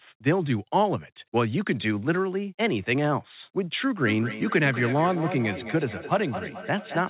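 Feedback echo between two devices runs from 4.06 s to the end of this speech clip at 7.1 s. Each sound returns roughly every fifth of a second, peaking about 10 dB below the speech, because a second device replays the audio into a microphone its echo canceller cannot cover. The narrow call band, with nothing above 4 kHz, fits G.711 mu-law.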